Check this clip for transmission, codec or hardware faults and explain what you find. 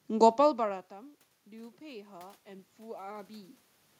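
One fault is audible: automatic gain rising, from 1.47 to 3.58 s. After the input fell by about 22 dB, the gain control slowly added about 4 dB, so speech and room noise swell together. The waveform envelope and the spectrogram's noise floor brighten gradually across that span.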